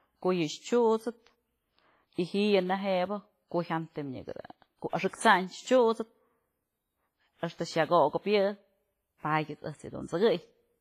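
Throughout the speech there is a ringing, washy texture with hiss that swells and fades with the level. This is heavy damage, likely from WMA compression, and it fits a low bitrate around 24 kbps, where quiet spectral detail is dropped and block-wide quantisation noise is left behind.

Pre-echo occurs at 2.14 s, 4.89 s and 5.16 s. A brief hiss of about 49 ms, 40 ms and 38 ms respectively leads into each sharp onset. The transform block spread its noise backward into the silence before the attack, so each onset sounds softened and smeared.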